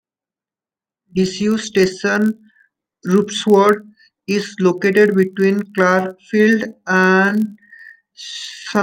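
A steady buzz at 46.9 Hz runs through the whole speech clip. This is a block size mismatch (padded): each block is topped up with zeros, which fits 1024-sample reads, and the sound plays at 0.999 speed.

From 5.83 s, right after "is located between", the pace drops abruptly to 0.678 speed and drags at the same pitch, likely a time-stretched section.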